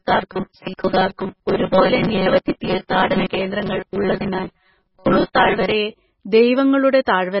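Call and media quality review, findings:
MP3 compression, whole clip: watery, swirly texture, smeared attacks, nothing above 5.5 kHz. Likely a low-bitrate MP3 encode, consistent with something near 16 kbps. Weak frequency lines drop in and out between frames, and the encoder cuts the treble.

Robotic sound from repeated short buffers, start to 5.72 s: rigid metallic buzz at 188 Hz riding over the speech. Likely the playback side starving and repeating its last ~5.3 ms of audio, with roughly half of the real signal skipped.

Pre-echo, 5.33 to 5.35 s: short hiss right before a sharp attack, spread over 22 ms, and the onset sounds smeared. The transform codec spreads quantisation noise across the whole block, so the quiet lead-in gets noise sized for the loud hit.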